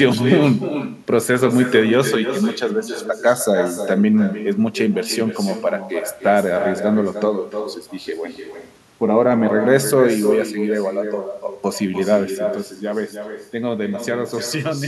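From the very start, every phrase gets shadowed about a third of a second later by a quieter, thinner copy sitting about 9 dB down. That's echo with no canceller: the far end plays the call over a loudspeaker, their mic catches it, and nothing strips it out before it comes back to you.

Then at 12.45 s the level drops abruptly by about 6 dB and stays down through the end. The likely cause is one channel dropping out: with one side of the stereo pair gone, the mono sum loses half of what both sides shared.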